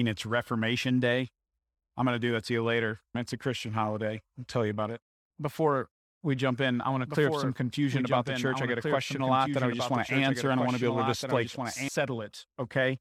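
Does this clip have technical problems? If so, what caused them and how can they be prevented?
Yes. From 7.06 s to 11.88 s there's a doubled audio track: a second copy of the speech runs about a second and a half behind the original, roughly 5 dB quieter. It's a clean, full-band duplicate with no reverb tail or room colour, and it cuts in and out abruptly at those points. The likely cause is the same signal reaching the mix twice, through a slower second capture path or an edit leaving an offset copy. To prevent it, route each source through a single path and check the edit for stray overlapping regions.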